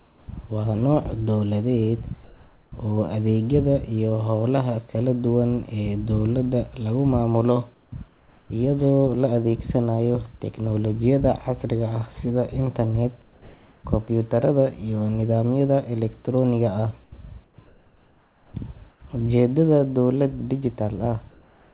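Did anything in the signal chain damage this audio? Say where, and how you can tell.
Yes, at the call-processing stage. Comfort noise in place of the background fills the pauses at 0.0–0.28, 2.24–2.72, 7.74–8.5, 13.22–13.84, 17.04–19.02 and 21.3–21.74 s. The background turns steady and featureless, likely from discontinuous transmission. A noise gate would leave true silence instead.

There is onset clipped by the voice detector at 0.26 and 18.52 s. About 20 ms of each start is replaced by noise, so the sound begins abruptly without a gap, unlike a packet dropout. The likely cause is slow voice detection.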